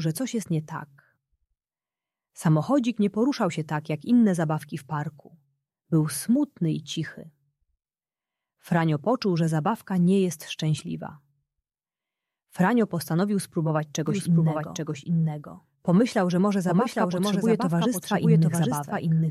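Damaged data in a compressed stream hits from 10.75 to 10.81 s. Corrupted or missing bytes leave the decoder unable to read those frames, so it loses sync and hunts for the next valid header. The result is a short blip.

A doubled audio track starts abruptly at 14.07 s and runs to the end. A second full-band copy trails roughly 0.7 s behind, about 5 dB quieter, with no decay or room colouring. The likely cause is the same audio captured again through a slower path.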